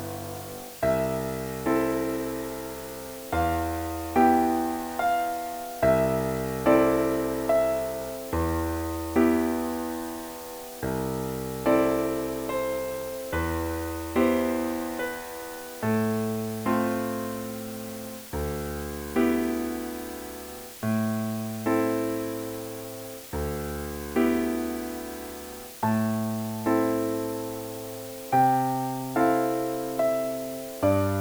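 From the first second to the last, there's a steady, even hiss sitting under everything. That's low bit depth with dither: the audio has been squeezed down to just 6 bits, with a little random noise mixed in before each sample gets rounded. Instead of gritty, signal-dependent distortion, the rounding error comes out as flat white noise. It sits only around 15 dB under the signal, so it's loud and constant, but clean rather than crunchy.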